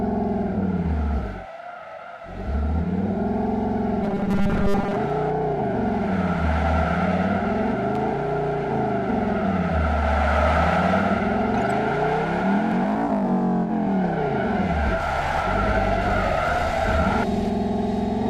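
From 4.03 to 4.97 s the audio turns into a rigid, metallic buzz fixed at 200 Hz, with most of that stretch made of repeats: robotic sound from repeated short buffers, likely caused by the same 5 ms of audio looping while late data is skipped. At 7.95 to 8.01 s a brief, irregular burst of scratchy crackle cuts in, loose connector crackle, from a worn or dirty contact rapidly making and breaking, chopping the signal.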